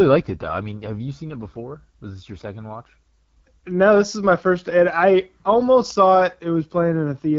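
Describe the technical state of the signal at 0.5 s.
At 0.5 s the speech carries AMR wideband (HD Voice) codec damage, present throughout. The rough, raspy texture points to the 8.85 kbit/s mode, where a pulse-driven vocal tract model codes speech up to 6.4 kHz. Unlike narrowband coding, the 6.4 to 7 kHz band remains, filled with shaped noise.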